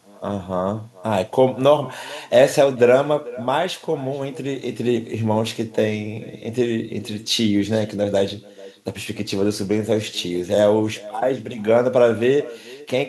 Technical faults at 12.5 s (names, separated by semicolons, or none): echo with no canceller